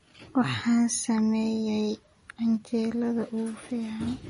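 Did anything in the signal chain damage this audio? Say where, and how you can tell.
Yes. The damage comes from the codec stage and runs through the whole speech clip: nothing survives above 10.6 kHz, and s sounds have a watery, swirling texture. This is likely MP3 compression at a starved bitrate, around 40 kbps. On a spectrogram there is a flat ceiling at 10.6 kHz, with weak frequency bands flickering on and off from frame to frame.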